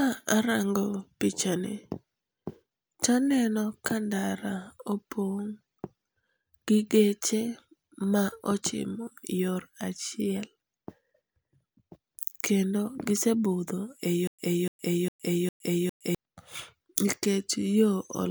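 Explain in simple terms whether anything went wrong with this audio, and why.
Stutter with silent gaps, from 14.27 to 16.15 s: the same 0.29 s piece of speech plays four times, each followed by 0.11 s of dead silence. Playback likely stalled and kept replaying its last fragment, so the speech meant for that stretch is lost.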